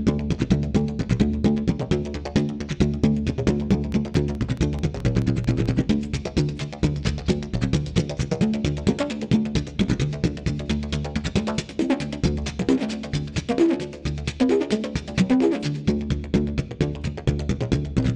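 From 3.71 to 5.67 s, a train of clicks ticks over the sound. About ten sharp, similar pulses arrive evenly, roughly 4.6 per second. They stand a few decibels above the signal. The likely cause is interference or a faulty connection or power supply.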